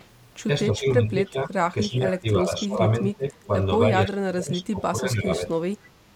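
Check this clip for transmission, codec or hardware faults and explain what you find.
The speech is repeatedly turned down by speech suppressed in double talk, at 0.7–1.56 s, 1.73–2.81 s, 3.0–3.53 s and 4.06–5.52 s. Level dips by about 15 dB, and nearer 25 dB in the last stretch. This is likely an echo canceller turning down its own talker along with the loudspeaker echo. The waveform shows sudden sagging envelopes, and the spectrogram shows faded, gappy bands.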